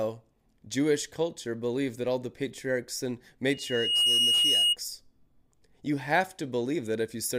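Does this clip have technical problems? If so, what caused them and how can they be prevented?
Yes. Loudspeaker feedback squeal runs from 3.50 to 4.77 s, right after "all the patriarchs and". The microphone picks up its own loudspeaker, and at 2.9 kHz the loop gain exceeds one. That single tone swells over about half a second to a few dB above the speech. A steady interfering whistle would start at full level, but this one grows by itself. Keeping the microphone away from and behind the loudspeaker, lowering the gain, or notching out 2.9 kHz would prevent it.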